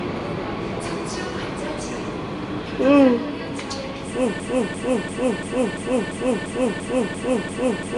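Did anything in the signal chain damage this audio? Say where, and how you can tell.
Yes. At the codec stage, the whole clip has a rough, hissy halo and a smeared, watery texture, with nothing above 10.6 kHz. That pattern is likely Nellymoser compression: coarse fixed-rate block coding starves weak bands and fills them with noise.

From 4.40 s to the end, the same 343 ms fragment repeats back to back about ten times, and the sound that should follow is gone. This broken-record loop likely comes from a stalled player, encoder or stream buffer that kept resending its last held fragment.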